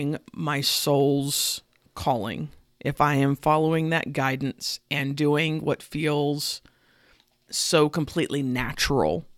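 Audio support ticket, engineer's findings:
No audible faults found.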